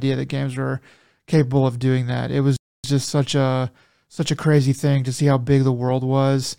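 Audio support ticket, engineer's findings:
Playback stall, 2.56–2.84 s: speech cuts to silence mid-flow for about 0.27 s, then continues. Likely component: player output path, its buffer running dry or its thread blocked, so no samples reached the device until recovery.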